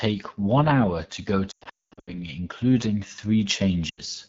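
Throughout, the AMR wideband (HD Voice) codec at 8.85 kbit/s, one of its two lowest rates, leaves the speech rough and raspy, with a spectrogram cut off near 7 kHz and smeared noise above 6.4 kHz. From 1.51 to 2.26 s, just after "hour to go", lost AMR speech frames make the decoder repeat the last sound and drop it to near silence within two frames. The losses total 460 ms, with the longest run 220 ms, so the waveform collapses in patches. A shorter 80 ms dropout follows at 3.89 to 4.01 s.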